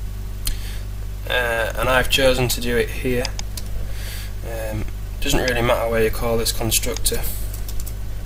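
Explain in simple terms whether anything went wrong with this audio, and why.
At 1.53 to 1.60 s there is a short stall from a late packet. A piece of audio arrived late, so the player held the last sound for about 44 ms, then carried on from the same spot. Unlike a dropout, nothing is skipped; the sound just briefly hangs.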